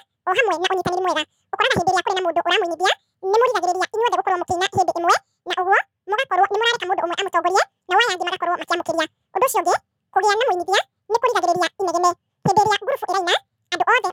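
From start to finish the speech plays as audio read two samples at a time (double speed): the reader treats each pair of samples as one frame, so everything runs twice as fast and a full octave higher. Unlike a pitch shift, tempo rises with pitch.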